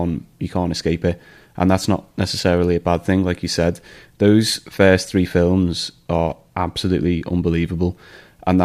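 After "said those first three", from 5.52 to 7.47 s, crude rate conversion adds a faint, gritty fizz. Unfiltered linear interpolation, likely 44.1 to 48 kHz, creates inharmonic tones.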